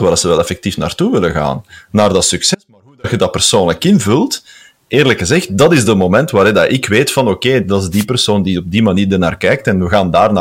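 The signal in this speech recording is driven about 11 dB past what a stage can pass, so the waveform's peaks are sliced flat throughout, which is hard clipping. Only around one percent of the samples exceed the limit, but each flattened top throws harmonics high into the spectrum, and the loudest moments crackle with a brittle, gritty edge rather than rounding off cleanly. From 2.55 to 3.04 s the wanted signal is cut for roughly half a second, most likely because the feed was lost upstream while everything after the break kept running. This is an audio dropout to a faint residue: the speech stops abruptly mid-flow, the gap holds only a thin trace about 35 dB below normal level, and the sound snaps back just as suddenly, nothing like a natural pause or fade. Twice the radio link of an analogue FM wireless microphone fades as reflections cancel its signal, letting receiver noise surge up over the audio. 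These wireless microphone noise hits land at 5.58 to 5.63 s, a brief swish of about 50 ms, and at 7.91 to 8.05 s, a longer burst of static lasting about 0.14 s.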